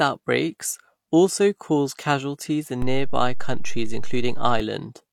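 A DC step starts at 2.82 s, just after "also caused casualties in": the waveform's zero line jumps to a new level, as happens when a converter recalibrates or an offset input switches in, giving a low thump while the speech continues unchanged. The offset is gone by 4.60 s.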